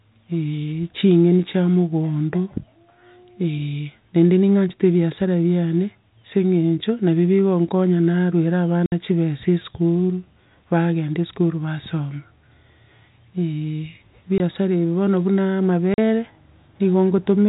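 Hard-edged dropouts cut the speech at 8.86–8.92 s (60 ms), 14.38–14.40 s (20 ms) and 15.94–15.98 s (40 ms). This is packet loss filled with silence. The gap lengths fit whole 20 ms packets of the G.711 telephone stream being replaced by digital silence.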